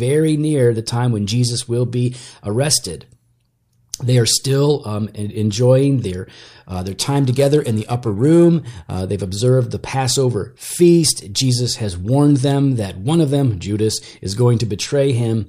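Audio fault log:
6.70–9.01 s, periodic clock jitter: interference wobbling the converter clock at around 1 kHz puts sidebands about that far above and below every component, strongest on high content, giving a rough metallic edge; a spectrogram shows parallel ghost traces flanking each partial.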